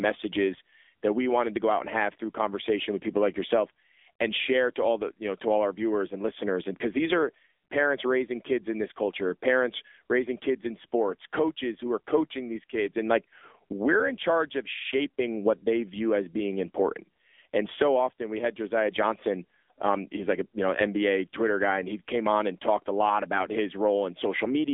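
From start to finish the speech passes through an AMR narrowband mobile codec. The line keeps only about 250 Hz to 3.6 kHz, so the sound is thin and boxy with no air on top. Unlike a plain telephone band-limit, the voice is also rebuilt from a vocal-tract model and a few pulses per subframe. The resulting buzzy, synthetic roughness is plainly audible, which fits a low AMR-NB mode around 7.4 kbps.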